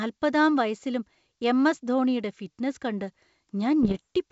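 From 3.83 to 4.0 s, bit errors on an ADPCM link produce pops and a rough, crackly burst with brief jumps in level. Each flipped bit throws off the decoder's step size and predictor, so every error rings on for several milliseconds. A spectrogram shows vertical broadband streaks, and the waveform shows spiky, uneven amplitude. The density of damage points to roughly half a percent of bits corrupted on the G.722 wideband path.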